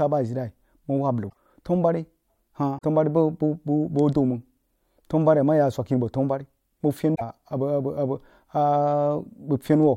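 At 1.29 s, 2.77 s and 7.14 s, the speech skips forward and a short garbled burst follows. The bursts last roughly 86, 72 and 74 ms. That is three to four frames of 24 ms each. The likely cause is a broken MP3 bit reservoir. Frames went missing, and the next frames reached back for borrowed data that was no longer there. They decoded from the wrong bytes and produced a brief chirp, noise or gap.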